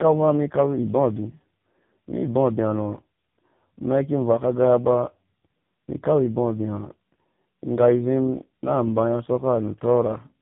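Tandem speech coding runs through the whole clip: the signal appears to have crossed several network links, each with its own speech codec, so it was decoded and re-encoded at every border. The artefacts point to three speech coders in a row, something like CVSD, then GSM full rate, then a low-rate AMR-NB mode near 6.7 kbit/s. Each stage compounds the last one's damage, leaving speech rough, muffled and warbly, with nothing above 3.8 kHz.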